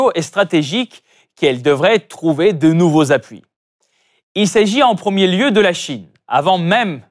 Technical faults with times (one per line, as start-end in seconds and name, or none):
none